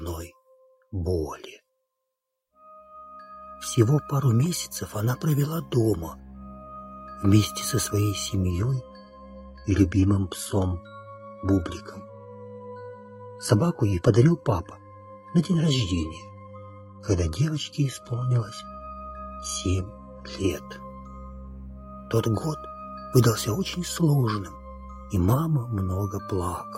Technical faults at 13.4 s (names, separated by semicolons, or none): adaptive stream at a lower bitrate